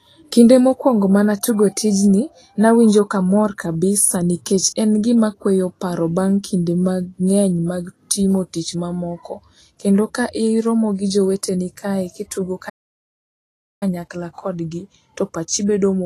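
Speech, carrying audible lossy-codec damage from start to finish, most likely Vorbis compression. The treble sounds hissy and grainy: fine high-frequency detail has been quantised so coarsely that it turns into noise of similar energy sitting on the codec's smooth spectral floor. Tones are roughened and consonant attacks are blurred. The degree of damage fits a low bitrate of around 32 kbps. At 12.69 s, right after "gi joweteni kae kitugo", the output drops to silence for about 1.12 s, until 13.83 s, when the sound picks up again with "kodgi to pachi bedo". This is a playback stall. The likely cause is the player running out of buffered data or its audio thread being blocked, so nothing reached the output until it recovered.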